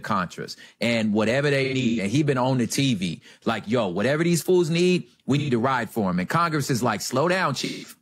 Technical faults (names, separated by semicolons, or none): AAC frame loss with concealment